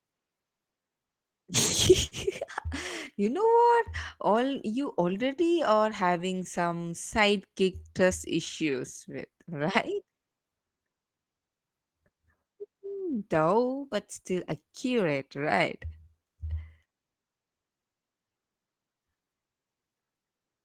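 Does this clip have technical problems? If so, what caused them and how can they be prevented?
Yes. This speech clip shows clock drift between sender and receiver. The sender's audio clock runs slow, by something like 4 percent relative to the receiver. Because fewer samples arrive than the receiver consumes, its jitter buffer keeps drifting toward empty for the whole clip. Left alone, that shortfall would cause repeated gaps, so the receiver has to keep compensating. That compensation is what makes the timing sound unsteady from start to finish. Preventing it means locking both ends to a shared clock, or running proper adaptive resampling at the receiver.

The repeated timing corrections are the receiver's response to that drift. From 0.18 to 1.33 s, playback runs at about 95 percent speed and adds around 70 ms. From 3.24 to 20.62 s, it runs at about 96 percent and adds roughly 0.7 s. 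Each small inserted repeat is a minor edit in the same stretching direction. Together, unevenly spaced, they give a faintly dragging, hiccupy tempo. Smooth continuous resampling instead of discrete piece repeats would keep these edits inaudible.

There is also a short stall from a late packet between 2.06 and 2.14 s. A packet missed its playout deadline and the jitter buffer ran dry. The receiver held the preceding sound for 53 ms until the packet arrived, then resumed from the same point. Nothing is lost, but that sound lingers slightly too long, with a faint buzz or dip, and the delay grows by 53 ms. A slightly deeper jitter buffer, or prioritising the media traffic, would prevent this stall.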